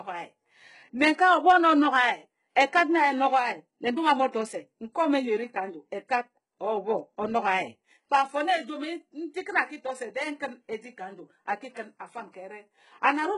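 Throughout, the treble is rebuilt rather than coded, likely HE-AAC compression at a very low bitrate; sibilants sound gritty and metallic, and nothing sounds above 11 kHz.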